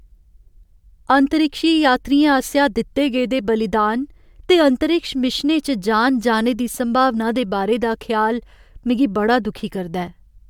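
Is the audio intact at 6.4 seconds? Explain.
Yes, the speech at 6.4 seconds plays through intact, with no audible fault at that moment.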